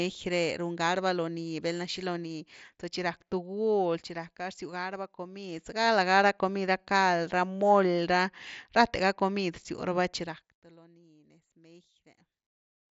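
Zipper noise runs from 1.96 to 2.84 s in this speech recording. The level drops by roughly 10 dB in 1 dB steps, about 30 a second, with no smoothing between them, so each jump leaves a tiny click and the fade ticks audibly. The audio tops out near 7.7 kHz, which fits a Bluetooth mSBC headset link.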